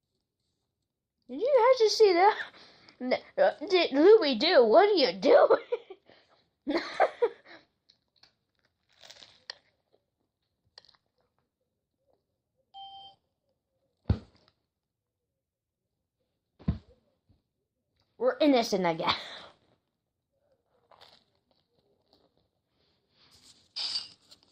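Nothing goes wrong anywhere in this one; there's no glitch, dropout or distortion to point to at any moment.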